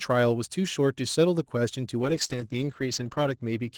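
Throughout the speech, sample clock jitter from an unsteady converter clock adds a faint roughness that rises on loud, bright sounds and disappears in pauses, unlike steady broadband noise. From 2.0 s to the end, a call bitrate drop makes the Opus coding coarser and watery, consistent with a fall to about 10 kbps. The top end narrows from 12 kHz to 8 kHz and stays there for about 1.2 s, so the muffling arrives with the coding roughness rather than on its own as a simple filter would.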